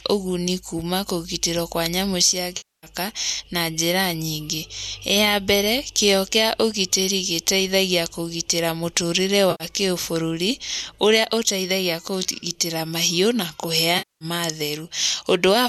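Around 2.57 to 2.87 s, 9.51 to 9.64 s and 13.98 to 14.25 s, the speech hits AAC frame loss with concealment: chunks of about 260, 90 and 230 ms vanished, and the decoder papered over them by reusing the last good spectrum, leaving smeared, noisy or phasey patches.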